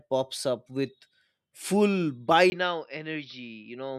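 At 2.5 s, after a 20 ms gap, speech dulls above 5.8 kHz, drops slightly, gains new noise: likely input switched to a poorer device, not filtering.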